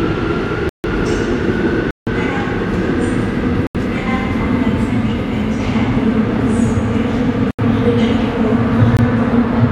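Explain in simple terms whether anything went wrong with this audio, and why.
Blocks of digital silence: the system likely briefly failed to supply sound, so the audio drops to silence and back abruptly, leaving holes at 0.69–0.84, 1.91–2.07, 3.67–3.75, 7.51–7.59 and 8.97 s.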